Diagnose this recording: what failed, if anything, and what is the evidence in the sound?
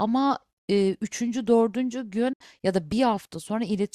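Playback over the wireless link failed: the speech drops to silence from 2.33 to 2.41 s, about 70 ms missing, likely a Bluetooth dropout of a few lost packets. Unlike a buffer underrun, the speech resumes further along, as if it kept playing.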